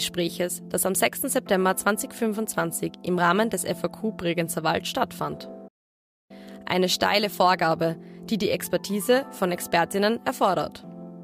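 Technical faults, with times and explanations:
5.67–6.31 s, playback stall: The sound cuts out in mid-flow and stays silent for about 0.62 s, then carries on. This gap most likely comes from the player running short of data or its playback thread being blocked, leaving the output with nothing to send.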